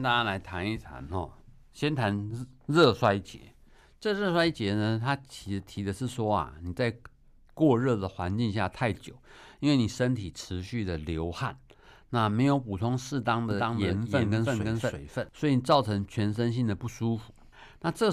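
From 13.51 s to 15.29 s the speech picks up a doubled audio track: a second, full-band copy running roughly 300 ms behind and about as loud as the original. The likely cause is the same signal being captured twice, once through a slower path. It comes across as a dry, flat slapback with no room tail, and it cuts in and out abruptly at both ends.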